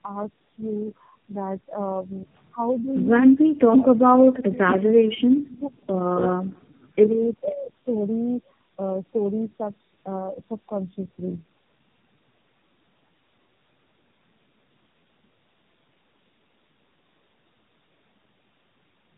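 Speech runs the full clip, and it sounds worn from start to finish. The cause is tandem speech coding. The sound is rough, muffled and warbly, and nothing is left above 3.8 kHz. That points to four low-rate speech codecs in a row, with the signal decoded and coded again at each border. Every coder has to work on the previous coder's damage. The losses stack up, so the result sounds worse than any one link would.

At 7.44 to 7.72 s the level of the speech drops sharply, by about 25 dB at its deepest. The drop lasts around a third of a second. This is speech suppressed in double talk. The likely cause is an echo canceller that heard both sides at once. It could not tell its own talker from the returning echo, so it turned everything down.

Inside that same stretch, at 7.47 to 7.53 s, a very faint copy of earlier sound slips through. It sits about 30 dB below the speech and arrives 487 ms late. 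It is brief and scrappy. This is an echo leak, most likely from a loudspeaker on one side of the call. That side's echo canceller failed to remove all of what its microphone picked up, and the remainder was sent back.

From 7.86 to 8.47 s the speech plays 6.04% fast. Its pitch rises by 102 cents, roughly a semitone. Then both snap back to normal. This is a drift correction step. Software matching two clocks likely changed the playback rate in one jump to drain its buffer, rather than adjusting it gradually.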